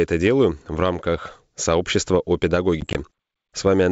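Speech coded as G.722 wideband telephone audio at 64 kbit/s, with at most faint coding damage, suffers packet loss on an ADPCM call between 2.81 and 3.00 s. About 50 ms of sound vanishes as hard-edged silent gaps scattered over roughly 140 ms, none longer than 20 ms, which fits about five short packets going missing. What separates this from a plain dropout is the aftermath. When the sound resumes, the decoder's adaptive predictor and step size no longer match the sender's, so each return comes back with brief, slight distortion before settling.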